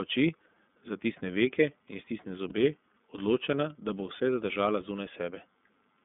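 Throughout, the speech carries plainly audible iLBC codec damage: a rough, slightly synthetic edge from coding each 30 ms frame on its own, consistent with the 13.33 kbps mode. A spectrogram shows energy confined to roughly 200 Hz to 3.5 kHz, with nothing above.

From 2.49 to 2.52 s, lost iLBC frames leave a gap of about 30 ms that the decoder fills by repeating the last pitch cycle mixed with noise. It sounds like a brief, buzzy held vowel. On the waveform, the same periodic shape repeats before normal speech resumes at once.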